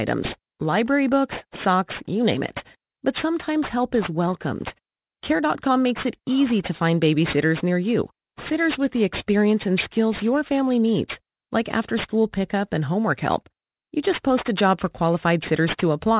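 Aliasing runs throughout: downsampling to an 8 kHz rate without filtering folds content above 4 kHz back down, making sibilants gritty and metallic at roughly 15 dB below the speech.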